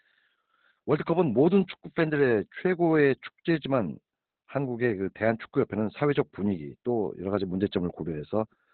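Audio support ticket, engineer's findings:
Opus voice compression throughout. Speech muffled, hoarse, faintly robotic. SILK narrowband coding with coarse excitation removes the upper band. The heavy damage fits about 8 kbps.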